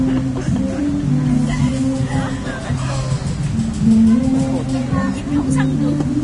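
Throughout, this sound recording carries hissy, grainy treble and blurred attacks, likely from Vorbis compression at a low bitrate near 32 kbps; a spectrogram shows nothing above 10.6 kHz.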